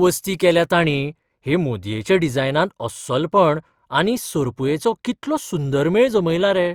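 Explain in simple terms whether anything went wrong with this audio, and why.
De-emphasis applied wrongly, from about 0.72 s to the end of the clip. A treble cut meant to undo a high-frequency boost was applied to speech that never had that boost, so the upper frequencies fade away gradually and the voice sounds dull and muffled.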